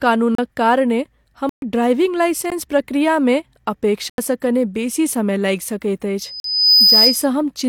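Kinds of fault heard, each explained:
Block of digital silence: the speech drops out completely and snaps back with no fade, five times, as the output was fed zeros, either from a buffer not filled in time or from invalid numbers. Gaps run 16 to 128 ms, one right before "कने बेसी समय".
Loudspeaker feedback squeal: the mic is hearing its own loudspeaker, and at 5 kHz the loop gain tops one, so that tone feeds itself. From 6.22 to 7.27 s it swells over roughly half a second to about 5 dB above the speech.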